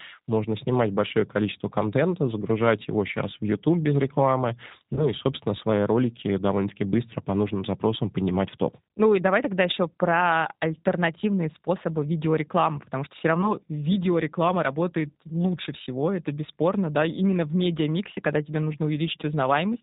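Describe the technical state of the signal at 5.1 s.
At 5.1 s the speech is still weak or distorted, recovering from VoIP packet loss concealed by the speech codec between 4.94 and 5.09 s. About 30 ms went missing, which fits three lost 10 ms frames. The decoder filled the gap by stretching its last pitch and filter into a fading buzzy tone or coloured noise. Each frame builds on the previous one, so the voice takes time to recover.

Over that sits the G.729 codec, with plainly audible damage. The voice sounds rough and synthetic, with nothing above 4 kHz, because it is rebuilt at 8 kbit/s from a filter, a pitch predictor and sparse pulses.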